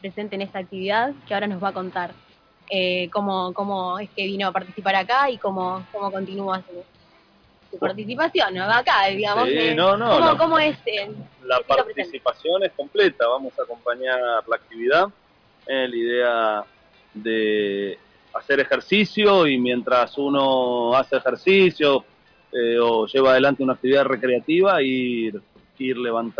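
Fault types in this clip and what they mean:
No technical faults are audible.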